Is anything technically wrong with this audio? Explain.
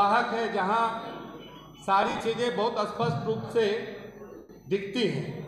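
Yes, there are two bursts of lost LE Audio frames. From 2.02 to 2.21 s, roughly 100 ms of audio drops out in patches over about 180 ms, the longest gap around 50 ms. At 4.37 to 4.50 s there's a solid 120 ms loss. In both, the LC3 decoder covers the holes by replaying the last good spectrum with scrambled signs, then fading it. So tonal content turns into a hissy smear that sinks toward silence in the longer gap.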